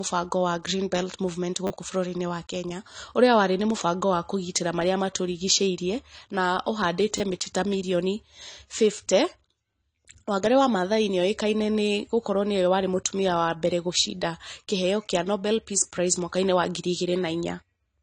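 Throughout, the speech sounds dull and smeared, with nothing above 10.1 kHz. This is likely AAC compression at a low bitrate, which fits about 32 kbps. At 1.67 s, a repeated buffer plays a 10 ms slice three extra times, giving a brief buzz. At 7.2 s, between "marĩa matũrigicĩirie na ũhandĩte" and "mĩtĩ ta mirioni", another repeats twice, losing about 20 ms.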